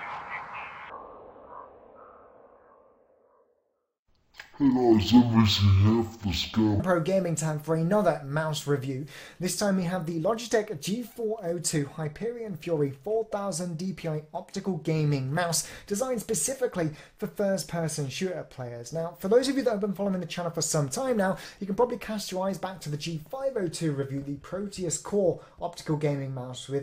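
Stereo read as mono runs from 0.90 to 6.80 s: the interleaved left and right samples are taken as one continuous channel, so each frame counts twice. The sound plays at half speed and a full octave low, with a faint mirrored image in the upper spectrum.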